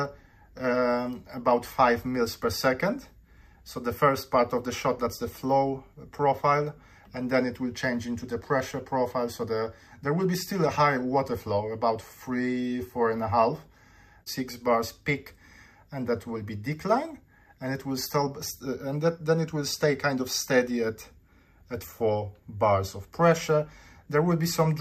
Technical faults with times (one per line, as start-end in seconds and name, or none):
none